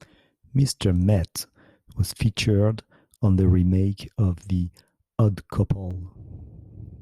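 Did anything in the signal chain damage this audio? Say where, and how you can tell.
Yes. From 5.91 s to the end, the speech has a metallic buzz at around 200 Hz, about 6 dB deep. That is overlap-add ripple from frame-based processing.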